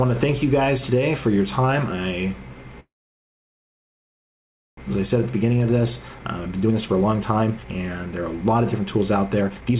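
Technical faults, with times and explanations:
2.8 to 4.79 s, call audio freeze: incoming packets stalled and the jitter buffer ran dry, so the receiver kept extending the last sound for about 2 s. It comes through as a short tail that fades, then roughly 1.9 s of silence, before the audio picks up exactly where it left off. Nothing is lost, but a pause has been inserted and the whole stream now runs about 2 s later than before. The packet stall is the likely cause of the gap.
5.06 to 9.76 s, jitter buffer speed-up: after the stall the buffer held far more audio than its target, and the receiver worked the excess delay down by cutting out short pitch-period-sized slices again and again. Around a second of audio is removed across this stretch, so playback runs at about 122% speed while the pitch stays the same, which gives the sound a hurried, pressed-forward feel. The G.711 A-law path carrying it limits the audio to below 4 kHz.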